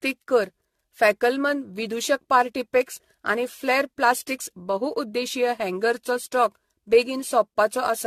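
A speech recording with generation loss throughout. It sounds swirly, hollow and smeared, with blurred attacks and nothing above 14 kHz. Likely cause: about ten passes through a lossy codec, fitting AAC-LC near 64 kbit/s.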